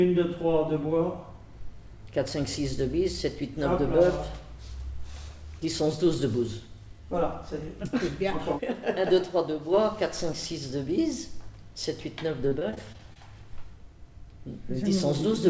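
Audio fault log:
12.48–13.17 s, repeated packet loss (robotic sound): The sound turns choppy for about 0.7 s. Seven short holes fall close together, the longest 32 ms. Each hole is filled by stretching the sound just before it, and about a fifth of the stretch is patched this way. The repeated patches leave the sound choppy with pieces missing. The call path's cut-off above 8 kHz, which fits G.722 at 64 kbps, dulls the top of it.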